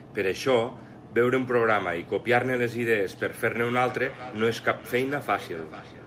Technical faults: feedback echo between two devices

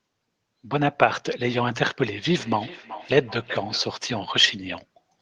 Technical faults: feedback echo between two devices

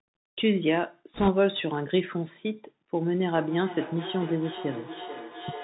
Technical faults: Bluetooth CVSD headset codec; bit errors on a Bluetooth voice link; feedback echo between two devices

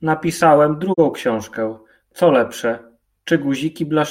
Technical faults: digital broadcast dropout

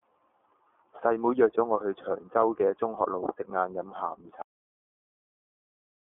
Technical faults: iLBC codec

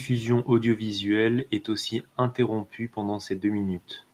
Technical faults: none

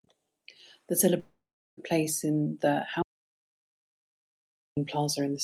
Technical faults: long network dropout; audio dropout to silence

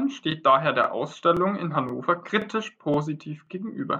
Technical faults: overlapping chunks

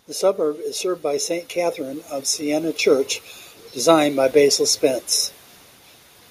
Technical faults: automatic gain rising

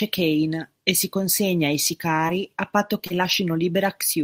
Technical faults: short concealed packet loss; lost packet rebuilt from error correction

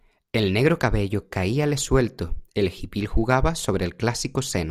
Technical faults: none

